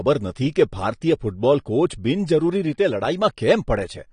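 From start to finish the speech sounds dull and smeared, with nothing above 9.8 kHz and a warbling, fizzy texture on sibilants and held sounds. The likely cause is AAC compression, its encoder trimming highs and coarsely quantising bands, consistent with roughly 32 kbps.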